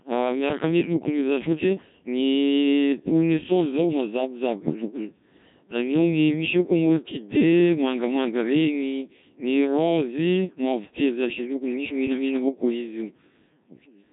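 From start to end, the speech carries heavy Codec 2 vocoder damage. Rebuilt from sine waves, it sounds robotic and buzzy, fitting roughly 1.3 kbit/s.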